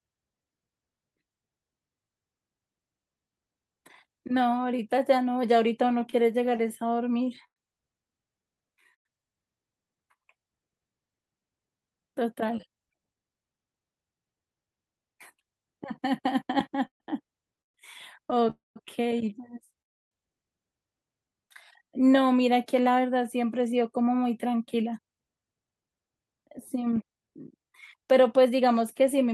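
A speech recording that suffers from a struggling jitter buffer on a call link. Repeated stalls (stutter) occur from 5.89 to 9.07 s and from 16.87 to 18.48 s. The first run has 16 short gaps, the longest 103 ms. The second has 7, the longest 129 ms. Packets arrived late, so the buffer kept running dry. Each gap is filled by stretching the last sound. Nothing is lost, but the speech drags and catches. Concealment covers about a tenth of the first span and nearly a fifth of the second. A jitter buffer slow-down runs from 6.94 to 10.23 s, at 98% speed. Another runs from 21.22 to 22.21 s, at 92%. The receiver repeated single pitch periods to rebuild its reserve. It added 79 ms in the first stretch and 90 ms in the second. Pitch stays put while sounds are drawn out. The second stretch drags more noticeably. A jitter buffer speed-up follows from 12.08 to 13.81 s, at 112% speed. A second runs from 23.58 s to the end, at 110%. 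Here the buffer held too much audio, so tiny pitch-period slices were cut out. Roughly 0.2 s goes in the first stretch and about half a second in the second. The pitch is unchanged, but the talk sounds hurried. Two call audio freezes sit at 18.50 to 18.78 s and 19.82 to 20.13 s. The last sound hangs briefly and then fades to silence. That silence lasts about 170 ms in the first and about 290 ms in the second. Speech then resumes where it stopped, about 0.25 s and 0.3 s later than before. The likely cause is packets held up in transit.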